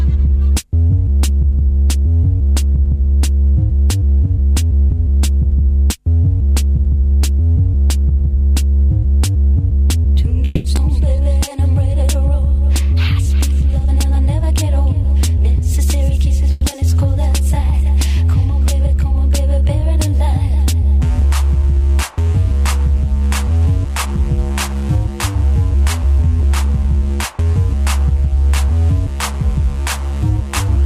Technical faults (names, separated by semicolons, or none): call audio freeze; skip ahead; jitter buffer slow-down; jitter buffer speed-up; short concealed packet loss